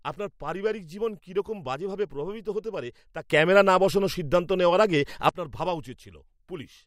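At 3.30 s, right after "প্রভাবিত হতে পারে তা", there's a sudden gain jump. The level leaps up by about 12 dB in a single step, and the speech and the background noise rise together, so the whole scene gets louder rather than just the talker. It stays up until 5.29 s, dropping back just before "আপনার ভাবা". That's likely a digital gain setting applied instantly with no ramp.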